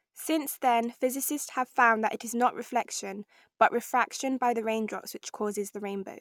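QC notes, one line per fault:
No fault found, so there are no QC notes to give for this speech clip.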